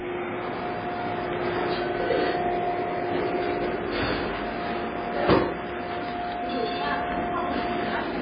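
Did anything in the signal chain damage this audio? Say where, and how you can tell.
Yes, at the codec stage: this is most likely MP3 compression, and heavy. Nothing survives above 5 kHz for the whole clip, and the sound has a watery swirl from weak frequency lines dropping in and out between frames. That fits a very low bitrate, around 16 kbps.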